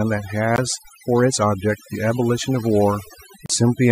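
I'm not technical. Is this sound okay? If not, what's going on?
No. The whole clip has overdone noise removal: a cleanup filter was turned up too far, so along with the background hiss it scooped out quiet bits of the voice. That leaves the voice over near-silence with faint twinkling specks.

There are also two tiny dropouts where the sound cuts to silence and resumes, at about 0.56 to 0.58 s and 3.46 to 3.50 s. The likely cause is a Bluetooth stall, when wireless interference briefly starved the headphones of audio.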